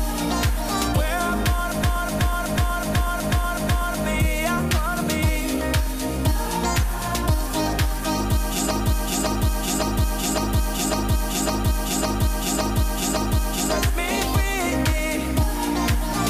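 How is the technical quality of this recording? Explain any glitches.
The recording has two stretches of repeated frames. Chunks of compressed audio were written more than once, so the decoder replays them. From 1.84 to 4.07 s, a 0.37 s block plays six extra times, and from 8.71 to 13.73 s, a 0.56 s block plays nine extra times. The result is a stuttering loop.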